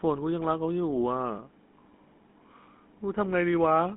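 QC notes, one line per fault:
Throughout: GSM full-rate codec. The speech carries a plain buzzy, gravelly roughness from coarse pulse-driven excitation, which fits the 13 kbps full-rate coder. The spectrogram is empty above 3.9 kHz, and energy concentrates between 200 Hz and 3.5 kHz.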